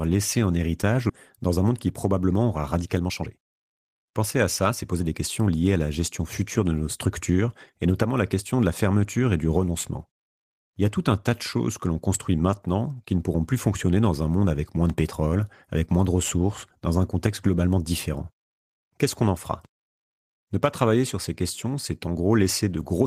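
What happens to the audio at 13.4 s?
Nothing goes wrong at 13.4 s; the speech there plays through intact, with no dropout, click, glitch or other audible fault at that moment.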